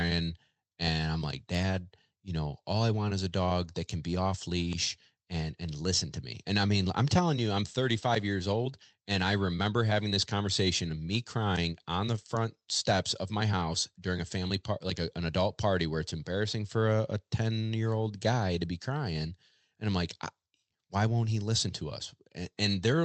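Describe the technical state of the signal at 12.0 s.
At 12.0 s the speech passes intact through the WebRTC call path, with no dropout, distortion or other fault at that point.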